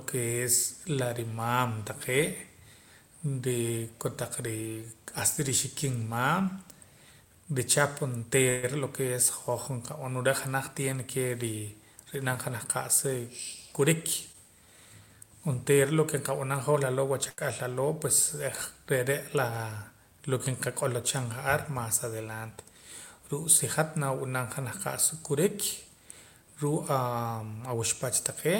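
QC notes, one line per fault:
8.49 to 8.65 s, call audio freeze: sound stretches into a fading buzz or hiss for about 136 ms, likely a jitter buffer running dry; it resumes where it stopped, nothing lost.
14.32 to 14.36 s, short concealed packet loss: a brief smear where about 40 ms goes missing, the gap patched over with 16 ms of continued sound, and playback shifts slightly earlier.
17.29 to 17.40 s, burst of packet loss: about 82 ms of held, dimming continuation covers 80 ms of dropped audio, which then resumes further on with that stretch gone, unlike a freeze.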